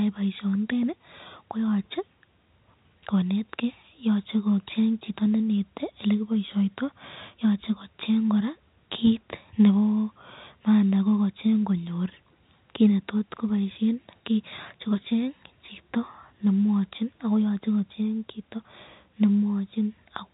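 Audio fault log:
Nothing amiss turns up in this speech recording, which simply has the narrow, top-capped sound you'd expect from ordinary G.711 telephone coding on a landline call.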